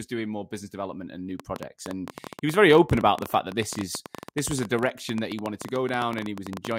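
Speech, with a train of clicks from 1.40 to 6.73 s after "business development and new": irregular ticking, about 13 per second, some about 10 dB above the speech, likely from nearby interference.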